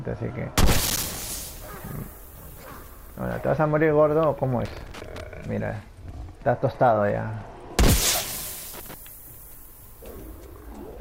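The audio has loose connector crackle in three places. The first is from 0.86 to 1.22 s, the second from 4.65 to 5.21 s, and the third from 8.74 to 8.94 s. Each is an irregular burst of crackle and scratching. A worn or dirty contact in the signal path is making and breaking as it moves. That chops the signal on and off in rapid, uneven bursts. The second burst is the longest, at a little over half a second.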